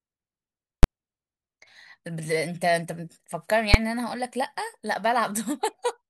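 At 0.83 s the speech is interrupted by a single hard bang, and at 3.74 s a second, shorter one follows. Both are invalid numbers at full scale: a calculation produced infinite or invalid values, and the output was forced to the largest possible sample value for a whole processing block. The first lasts about 12 ms, fitting a 512-sample block. The second lasts about 6 ms, fitting a 256-sample block. Both are too short to be heard as anything but one bang.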